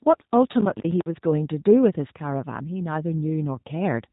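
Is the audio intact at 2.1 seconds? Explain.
No, G.729 codec damage runs through the whole clip, including 2.1 s. The speech is rebuilt from a vocal tract filter, a pitch predictor and a few pulses per frame at what sounds like 8 kbit/s, so nothing above 4 kHz survives and the speech sounds rough and synthetic.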